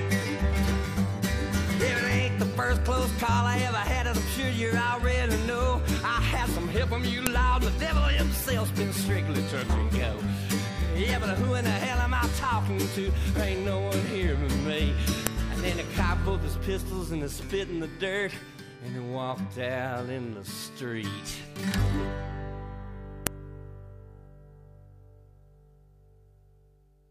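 At 7.27, 15.27 and 23.27 s there is a sharp, loud click, repeating every 8.0 s. This is a file header played as audio: separate WAV pieces were joined without stripping their headers, so a few dozen header bytes play back as samples at each join, regardless of the surrounding sound.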